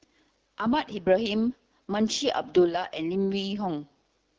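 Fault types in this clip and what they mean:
AMR wideband (HD Voice) codec: the speech runs through a low-rate wideband phone codec throughout, and the damage is plainly audible. A rough, raspy edge sits on the voice, which fits a bitrate around 8.85 kbit/s, where the vocal-tract model gets too few pulses to work with.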